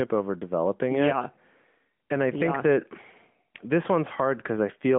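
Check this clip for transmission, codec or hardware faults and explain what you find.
No transmission, codec or hardware faults.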